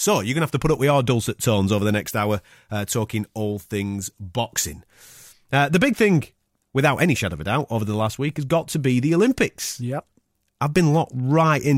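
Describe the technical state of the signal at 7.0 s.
At 7.0 s the speech signal is intact, with no audible technical fault at that moment.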